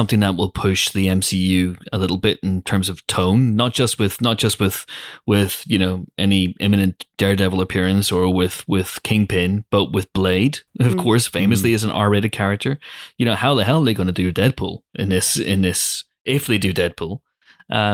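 Speech recording with no audible technical faults.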